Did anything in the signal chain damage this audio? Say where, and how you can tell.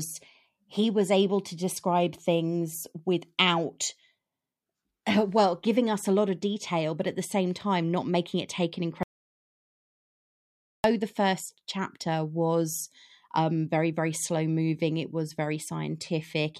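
Yes. At 9.03 s, right after "making it take an", the speech stops dead and the track falls to silence, with no room tone or hiss beneath it, until 10.84 s, where it resumes mid-flow at "the first chapter was". This audio dropout to silence removes about 1.8 s of speech. The stage is the input side: the recorder or encoder kept writing silence while the source was likely disconnected, its link failed, or it was muted.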